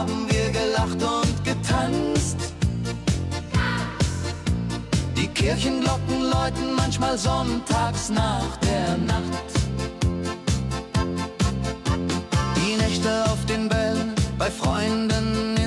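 There are no technical faults to describe in time order in this clip.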